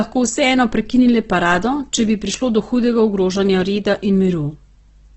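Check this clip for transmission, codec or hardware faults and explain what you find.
One codec fault runs through the whole of this speech clip: heavy Opus compression, likely at a very low rate around 12 kbps. Nothing appears above 8.2 kHz, so the sound is held to wideband and loses its airy top. With so few bits, the encoder's music-style band coding fills starved bands with folded copies of lower ones or with noise. The sound turns grainy and rough rather than swirly. On a spectrogram, a hard ceiling sits at 8.2 kHz with smeared, noise-textured bands below it.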